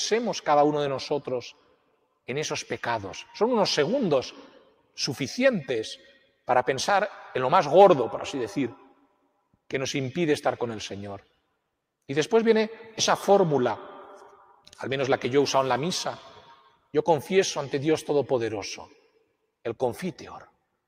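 Sound cut by the noise suppressor recurs at 1.53–2.05, 4.55–4.97, 6.09–6.48, 8.84–9.27, 16.56–16.87 and 18.92–19.22 s. Each time, the suppressor mistakes wanted sound for noise and pulls it down by about 12 dB, or about 10 dB in the last. Steady parts sink, and decays end early.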